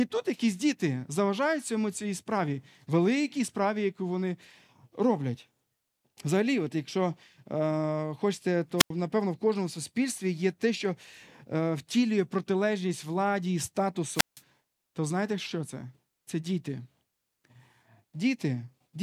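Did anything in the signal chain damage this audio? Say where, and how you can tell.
Yes: a wireless microphone squelch dropout on the analogue radio link. Hiss swells as the signal fades at 8.78 s and 14.12 s, then the receiver's squelch mutes for 89 ms and 162 ms. Network packet loss has no hiss before its gaps.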